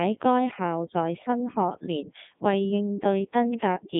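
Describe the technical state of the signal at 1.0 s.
At 1.0 s the speech is passing through a Codec 2 vocoder, as it does for the whole clip. Only pitch, voicing, energy and spectral envelope survive, consistent with its 3.2 kbit/s mode. The decoder rebuilds the voice from sine waves, leaving it buzzy and robotic, band-limited to roughly 150 Hz to 3.6 kHz, with nothing above 3.8 kHz.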